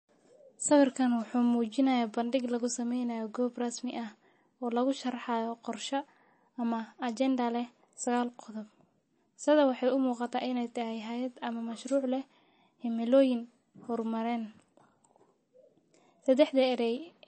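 Throughout the whole speech recording, the likely cause of the damage is MP3 compression at a very tight bit budget, which fits a bitrate of around 32 kbps. Starved of bits, the encoder discarded everything above 8.4 kHz, so the speech has a dull, capped top end, and it dropped weaker frequency components that flicker in and out between frames, leaving plainly audible watery, swirling codec artefacts across the sound.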